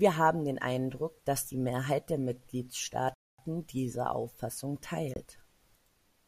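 At 3.14 s the speech drops to silence for 243 ms, then returns at 3.39 s. At 5.14 s a shorter gap of 24 ms follows. Both sound like a Bluetooth stall. Radio interference likely delayed packets on the wireless link. The headphones' buffer emptied before the resent data arrived. Playback simply halted. The gaps are clean dead air, not noise or crackle.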